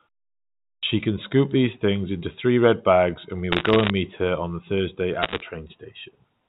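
Speech over a G.711 A-law telephone path, which leaves nothing above 4 kHz. The output device dozed during the opening 0.79 s of silence and needed time to wake, a clipped start after a pause: roughly 38 ms is swallowed at 0.79 s, so "can scoop these things" bursts in abruptly, missing its first sound. Bit errors on a digital phone line then corrupt individual samples, with flips in the sign or upper bits turning into sharp ticks. From 3.52 to 3.90 s, between "red bags and we" and "meet her on", a rate a little under one percent lays crackle over the speech. A second, slightly denser burst of about one percent follows from 5.22 to 5.42 s.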